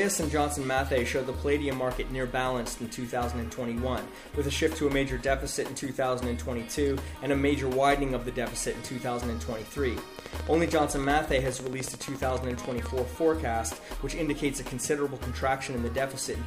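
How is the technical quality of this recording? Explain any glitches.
The recording has one glitch. From 10.19 to 12.87 s there is a train of clicks: about forty near-identical pulses at a regular 14.2 per second, peaking roughly 10 dB above the sound, likely from electrical interference or a faulty connection. It sounds like steady ticking. A waveform shows evenly spaced spikes, and a spectrogram shows a comb of thin vertical lines.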